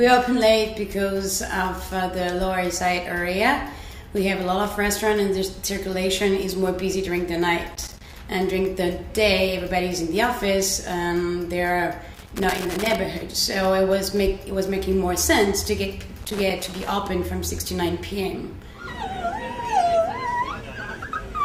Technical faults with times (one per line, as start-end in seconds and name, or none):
7.74-8.17 loose connector crackle
12.14-12.95 loose connector crackle
16.22-16.88 loose connector crackle